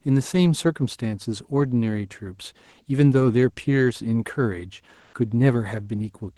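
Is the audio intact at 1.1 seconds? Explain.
Yes, the speech at 1.1 seconds is intact, with no dropout, glitch or other fault at that moment beyond the ordinary coding character of the call path it passed through.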